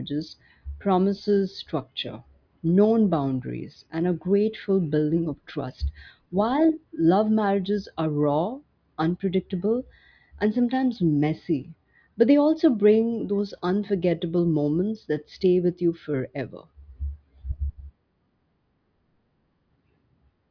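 Speech with no audible faults.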